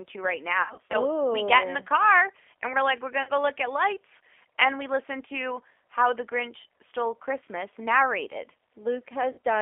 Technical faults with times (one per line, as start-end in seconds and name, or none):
0.00-9.62 G.729 codec
0.62-0.98 VoIP packet loss concealed by the speech codec
3.23-3.31 VoIP packet loss concealed by the speech codec
9.32-9.38 VoIP packet loss concealed by the speech codec